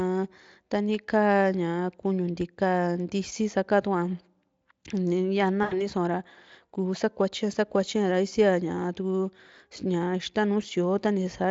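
From 5.63 to 5.84 s there is VoIP packet loss concealed by the speech codec. About 80 ms went missing, which fits four 20 ms frames. The Speex decoder replayed its last pitch at falling gain, leaving a brief buzzy tone or coloured noise that fades. On a spectrogram the harmonics appear flat and smeared, and the waveform envelope tapers away.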